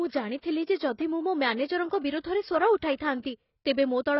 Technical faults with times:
0.00-4.20 AAC compression

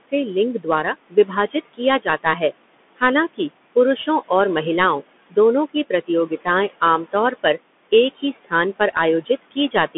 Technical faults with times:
0.00-9.97 noise suppressor artifacts
0.00-9.97 Bluetooth CVSD headset codec
0.00-0.13 speech cut by the noise suppressor
0.61-2.26 speech cut by the noise suppressor
5.74-7.45 speech cut by the noise suppressor
8.14-9.96 speech cut by the noise suppressor

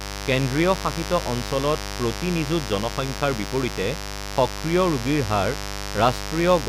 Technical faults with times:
0.00-6.68 mains buzz

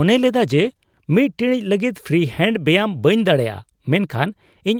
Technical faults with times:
none

